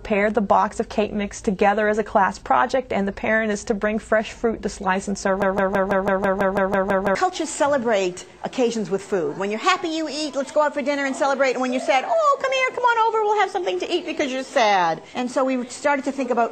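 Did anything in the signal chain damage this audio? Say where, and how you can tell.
Yes. From 5.42 s to 7.15 s there's a broken-record loop: the same 165 ms fragment plays back to back 11 times, with no variation between passes. That points to a playback or stream buffer that likely stalled and kept resending its last chunk, and the audio that should have filled that stretch is gone.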